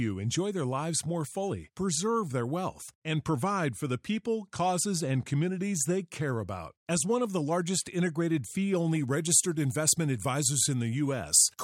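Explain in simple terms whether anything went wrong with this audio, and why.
From 8.76 s, after "largest integrated fee", to the end, pre-emphasis was left on. The treble boost was never undone, so the speech turns thin and hissy on its S sounds.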